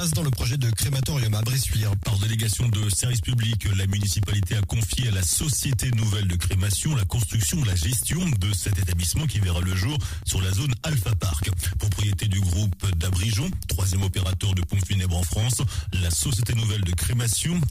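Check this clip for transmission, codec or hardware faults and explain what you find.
The clip has periodic USB or driver dropouts from 0.13 s to 17.63 s, repeating every 0.1 s. At each interval, something briefly stalls the USB bus or audio driver, and roughly 2 ms of sound is lost and replaced by silence. This produces a steady ten-per-second ticking that is heard only where sound is present. Unlike random network packet loss, these gaps are strictly evenly spaced, which points to a scheduled background task.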